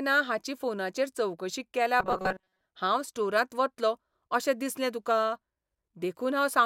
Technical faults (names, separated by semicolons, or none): robotic sound from repeated short buffers